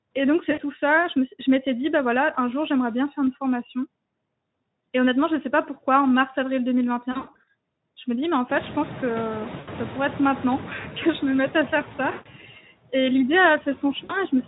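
A noise suppressor runs throughout, cutting what it judges to be steady noise by about 20 dB frame by frame. The residual noise dips between phrases and swells under the speech.

Speech-codec packets go missing at 0.51–0.63 s, 2.33–2.37 s (between "m'étais dit bah voilà" and "un jour j'aimerais bien"), 7.11–7.48 s, 9.59–9.69 s, 12.11–12.28 s (after "me mette à faire") and 14.04–14.17 s. Each time, the decoder's packet loss concealment extrapolates from the last pitch and filter, so the sound smears into a buzzy tone or a coloured noise that fades, and stays weak briefly afterwards. The 7.11 s stretch is the worst, with losses scattered over about 360 ms and the longest gap near 100 ms.

When the room noise jumps by about 20 dB near 8.5 s, the noise suppressor is catching up. Its noise estimate lags from 8.49 to 10.9 s, after "me dis mais en" and before "que je me mette", cutting only about 5 dB at first, so the noise comes through and then sinks.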